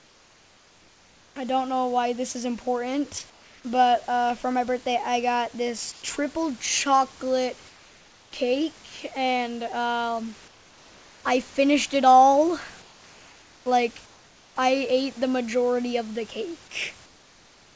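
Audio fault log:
0.00–1.36, 3.30–3.64, 5.92–6.02, 7.68–8.32, 10.48–11.24, 12.82–13.66, 14.06–14.56 and 17.06–17.76 s, comfort noise in place of the background: in each pause the room's textured background gives way to a flat, featureless hiss. It is about 4 to 6 dB quieter, except for the brief gap at 5.92 s between "birthday I got this" and "triple chocolate", where the level stays the same. This is likely discontinuous transmission: the sender goes silent when no speech is detected, and the receiver fills the pause with synthetic noise.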